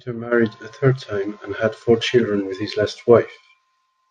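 From the start to 2.0 s the speech plays from an adaptive stream starting at a low bitrate, about what 48 kbit/s MP3 gives: dull treble and smeared, swirly codec artefacts. At 2.0 s it jumps to roughly 128 kbit/s quality with no gap. That seamless step up, not dropout, marks a player switching versions.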